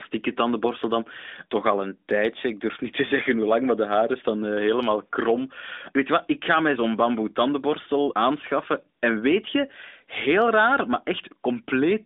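No technical faults are present in the speech, which carries the narrowband character of the AMR-NB mobile codec, with its band limited to roughly 250 Hz to 3.7 kHz and only the light coding texture expected at 12.2 kbps.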